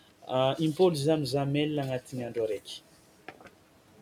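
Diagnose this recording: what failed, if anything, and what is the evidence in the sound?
Speech cut by the noise suppressor, 3.28 to 3.54 s, in call processing: quiet speech was mistaken for noise and pulled down about 12 dB, sounding swallowed.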